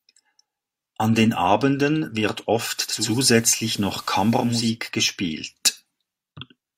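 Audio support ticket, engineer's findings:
Digital radio blending to analogue, 2.75–4.77 s. Receiver drops digital and cross-fades to the FM broadcast over 461 ms. Hiss rises, roughly 25 dB under the speech. Level shifts about 2 dB. Returns to digital at 4.77 s.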